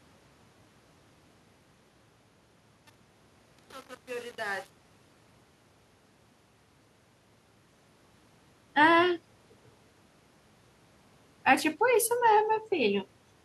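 From 0.0 to 5.83 s the speech fades in with truncation distortion: with only about 7 bits kept and no dither, the quiet start sounds gritty, unlike a smooth hiss floor.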